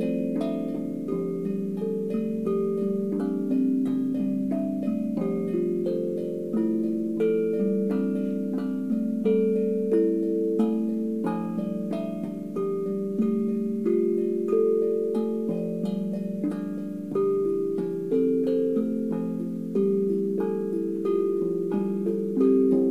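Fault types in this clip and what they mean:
There are no fault types in this clip, as nothing in these sounds points to a technical fault.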